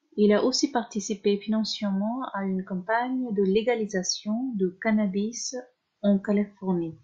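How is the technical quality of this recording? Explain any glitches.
No glitches or technical faults can be heard anywhere in the recording.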